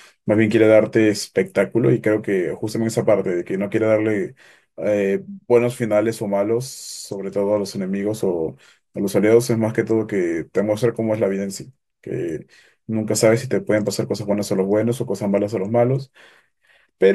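No dropouts, clicks, distortion or timing breaks can be heard anywhere in the recording.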